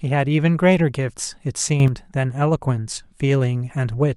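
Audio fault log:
1.8–1.88 s, sudden gain jump: the speech and its background noise rise together by about 8 dB from one sample to the next with no ramp, most likely a gain setting or bit shift applied instantly rather than faded in, so the level steps.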